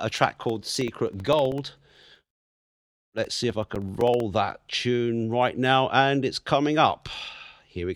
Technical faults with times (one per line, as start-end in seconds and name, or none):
0.11-4.20 periodic USB or driver dropouts